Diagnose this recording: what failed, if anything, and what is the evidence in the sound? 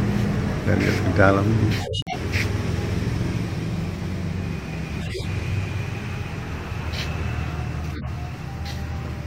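The codec stage failed: there's a corrupt frame muted at 1.80 to 2.15 s, where the sound drops abruptly into a clean 0.35 s hole. The decoder rejected damaged frames and the player filled them with silence, which fits several roughly 50 ms frames, with timing intact.

There are also two corrupt frame decoded events, where damaged frames got played anyway: one at 5.01 to 5.25 s peaking at about -15 dBFS, and a shorter one at 7.93 to 8.08 s at about -20 dBFS. Misread gains and codes put energy at the wrong frequencies for a few frames each.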